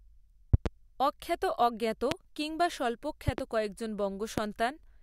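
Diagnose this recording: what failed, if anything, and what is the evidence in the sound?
Loud pops, likely a flaky analogue connection: doubles at 0.54 and 3.28 s, singles at 2.11 and 4.38 s, jumping roughly 15 to 20 dB over the ongoing speech.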